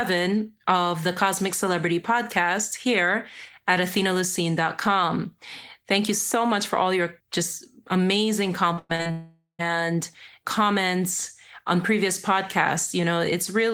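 A speech clip with two connected network faults shortly after "all your just amazing". From 8.73 to 9.07 s there is repeated packet loss with a robotic sound. About four short holes, the longest around 100 ms, are each patched by stretching the preceding sound, so roughly three-fifths of that span is synthetic fill. This gives a choppy, robotic texture where the sound keeps breaking and resuming. Then from 9.11 to 9.61 s, nearly half a second of audio is gone. The last sound is drawn out as a fading buzz or hiss and ends in about 0.11 s of silence before speech returns with that part missing. The likely cause is a long network dropout. What separates the two faults is this: the first is a rapid stutter of brief patches with real audio between them, while the second is one continuous hole in which the concealment decays to nothing.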